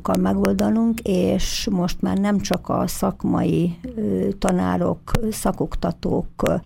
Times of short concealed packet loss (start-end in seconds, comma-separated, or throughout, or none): none